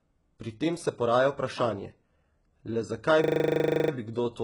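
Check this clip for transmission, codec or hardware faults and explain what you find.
Two faults. Throughout, the treble is gritty and synthetic and stops above 11.1 kHz. The likely cause is heavy HE-AAC compression at a very low bitrate. Copied upper bands give the s sounds a metallic lisp.

From 3.24 to 3.92 s there is a system hang loop. The driver froze, so one 40 ms buffer repeats. It sounds like a 25 Hz buzz, with little audio actually lost.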